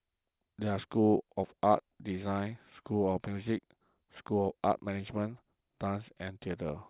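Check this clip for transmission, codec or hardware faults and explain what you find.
Nothing in the speech here suggests a problem with the transmission, the codec or the hardware, so there's nothing to flag.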